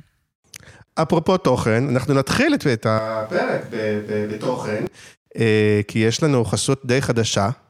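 A speech clip, and from 2.99 to 4.87 s it suddenly goes roomy and hollow, thinner in the bass, roughly 5 dB quieter, with room noise rising to around 35 dB below the voice. That's a switch to a distant microphone, likely the close mic dropping out briefly.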